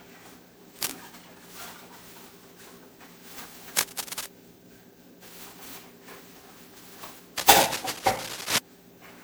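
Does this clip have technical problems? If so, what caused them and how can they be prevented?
Yes. Throughout the clip there is generation loss: the sound is swirly, smeared and hollow beyond what a single lossy encode would produce, and attacks are blurred. The likely cause is repeated lossy coding, with a character that fits an MP3 chain at around 128 kbit/s passed through roughly ten times. Each decode and re-encode quantises again on a shifted frame grid, so the noise and spectral holes accumulate rather than staying fixed. To prevent it, keep working copies in a lossless format and encode to MP3 only once, at the final step.

There is also cable scratch noise in three places: 0.79 to 0.94 s, 3.77 to 4.28 s, and 7.37 to 8.59 s. Each is a dense, uneven burst of scratching and rustling roughly as loud as the sound itself, and the last one is the longest at about 1.2 s. The likely cause is a worn cable, connector or control being moved during recording. 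The contact resistance then fluctuates rapidly, and the signal picks up those irregular noise bursts. To prevent it, replace or clean worn cables and connectors and secure them so they cannot shift while recording.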